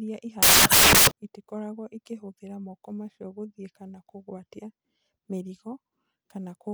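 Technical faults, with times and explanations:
0.43 to 1.11 s, samples built from the wrong bytes: the speech turns into loud, harsh broadband noise. Misassembled bytes put the rapidly changing low bits into each sample's large part.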